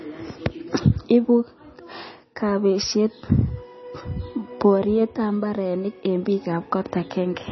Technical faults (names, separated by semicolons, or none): MP3 compression